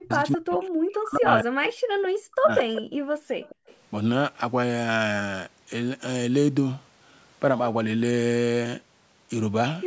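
From the start to 2.65 s, the speech repeatedly sinks and breaks up in pieces, at its deepest falling by about 40 dB, for around two seconds in total. This is speech suppressed in double talk. The likely cause is that both ends were talking at once, and the echo canceller, unable to tell this talker from the loudspeaker's echo, pulled the level down on both.

Overlapping that, from 2.58 to 2.82 s, a strong repeat of the sound trails the original by 213 ms, only a few decibels quieter. A much fainter repeat, at the same 213 ms delay but roughly 25 dB down, returns from 3.44 to 3.76 s. Both are echo leak: one side is likely playing the call on a loudspeaker, and its canceller let part of what its microphone heard slip back down the line.

Between 2.93 and 3.67 s the room sound behind the speech drops away sharply, by about 40 dB at the deepest point, for roughly half a second in all before it comes back. 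That is background gated by the echo canceller. While the loudspeaker was active, the canceller clamped the microphone hard, taking the ambience down with it, and restored it once it released. Throughout, the call microphone processing limits the audio to nothing above 8 kHz.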